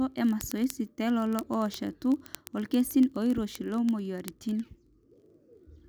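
A digital link is being read by a device on its own clock, drifting about 0.1 percent from the sender's, so one sample is dropped or repeated roughly every 20 ms. From 0.12 s to 5.86 s the speech carries word clock ticks, a few hundred sharp clicks of uneven strength at a steady rate near 50 per second.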